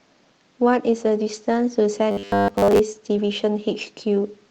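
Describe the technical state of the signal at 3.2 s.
A brief rough, noisier patch at 3.15 s is a lost packet rebuilt from error correction: one 20 ms packet went missing, and the decoder played the lower-quality copy carried in the following packet, so there is no gap, just a momentary coarsening of the sound.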